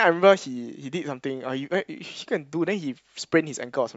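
No technical faults can be heard anywhere in the speech recording, so there is nothing to place on the timeline.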